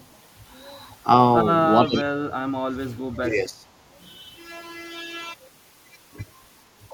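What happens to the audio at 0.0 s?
An echo leak sits at 0.0 to 0.07 s: a very faint, delayed copy of the speech, trailing it by 449 ms. It is likely a far-end loudspeaker echo that the echo canceller failed to fully remove and sent back down the line.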